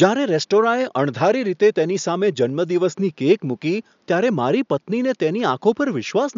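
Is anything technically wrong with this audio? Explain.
No, nothing technically wrong can be heard in this speech clip. There is some room noise in the background, sitting about 47 dB below the speech, and that belongs to the recording space rather than to any fault in the system.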